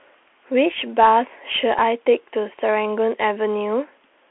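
From start to finish the speech carries the sound of a Bluetooth CVSD headset codec, plainly audible throughout. Energy is confined to roughly 300 Hz to 3.4 kHz, so the spectrogram shows an empty region above 3.4 kHz and a thin floor below 300 Hz. CVSD's one-bit up-or-down coding, which fits a 64 kbps link, lets loud, fast transients outrun its adapting step. This leaves scratchy s sounds, a granular hiss speckling the band, and rounded, slope-limited edges on the waveform.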